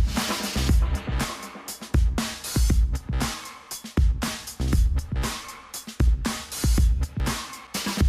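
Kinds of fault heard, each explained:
Dropped buffer (overrun): three jumps where the sound skips ahead about 20 ms with no silent gap, unlike an underrun; likely unread samples were overwritten.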